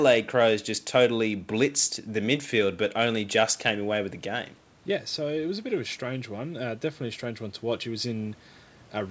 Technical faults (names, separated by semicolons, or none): automatic gain rising